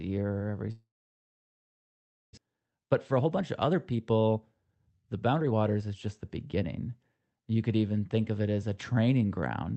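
Speech recording with two faults. A long network dropout, likely a stall in packet delivery, begins at 0.71 s. The receiver stretches the last sound into a brief fading buzz, then about 1.5 s of silence follows until the audio returns at 2.39 s, with about 1 s of material lost for good. From 2.47 s to 6.89 s a jitter buffer speed-up works off the backlog left by that stall by repeatedly cutting out short pitch-period slices. The speech runs about 14% fast at unchanged pitch and sounds hurried, and around 0.7 s is trimmed away in total.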